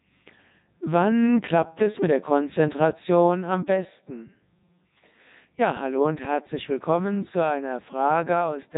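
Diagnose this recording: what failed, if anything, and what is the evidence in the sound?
The codec stage failed. Throughout, the speech carries heavy Codec 2 vocoder damage: robotic, buzzy, nothing above 3.8 kHz, fitting the 3.2 kbit/s mode. The decoder rebuilds speech from sine waves using only pitch, voicing, energy and envelope, discarding the waveform.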